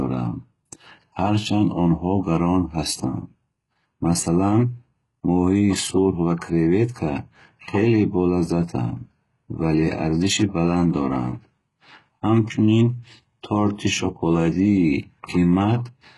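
From start to finish, the speech carries the signature of heavy HE-AAC compression, likely at a very low bitrate around 12 kbps. Only the lower spectrum is truly coded; the upper band is rebuilt by copying lower bands upward under a coarse envelope, so s sounds come out gritty, metallic and lispy. A spectrogram shows nothing above 11.5 kHz, with the replicated treble looking blocky and smeared rather than tracking the real harmonics.

At 6.39 to 6.41 s there is pre-echo: a short hiss of about 27 ms leads into a sharp attack. Because the codec spreads quantisation noise across the whole transform block, noise scaled for the loud onset leaks into the quiet instant before it, softening the attack. On a waveform this appears as a low, fuzzy ramp ahead of the transient; on a spectrogram, a broadband smudge just before the onset.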